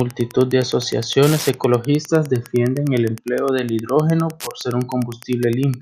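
Throughout the speech, Wi-Fi interference: a nearby radio's beacon, rectified every 102.4 ms, ticks steadily about twenty dB down, unlike GSM buzz's harsher 217 Hz bursts.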